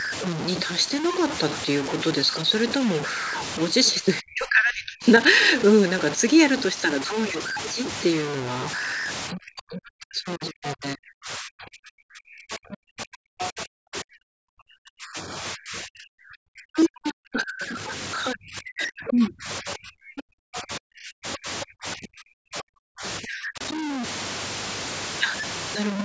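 Low bit depth without dither runs through the whole clip: a coarse, grainy distortion that rides on the speech and rises and falls with it, sitting only about 10 dB below the signal. Unlike steady hiss, it disappears when the sound stops and turns into sputter on quiet tails. That tracking grit likely comes from truncation to very few bits, which fits a 5-bit signal with no dither to smooth the steps.

Speech suppressed in double talk first appears from 4.02 to 5.04 s, then returns in longer spans from 9.33 to 17.89 s and from 18.32 to 23.61 s. The talker's level is pulled down in chunks, by as much as roughly 40 dB at the deepest points, leaving the speech hollow or briefly absent. This is gain ducking rather than packet dropouts. That points to an echo canceller likely attenuating everything while both sides spoke.

Other side's voice leaking through shows up as tiny scraps inside those suppressed spans, at 13.42 to 13.46 s, 13.96 to 14.00 s, 18.81 to 18.89 s and 19.68 to 19.72 s. 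The first sits about 10 dB below the speech, the rest about 20 dB below. Unlike the grit, which follows the talker, these fragments belong to a second voice. They are the likely result of loudspeaker echo that the canceller failed to remove from a microphone whose band reaches up to 8 kHz.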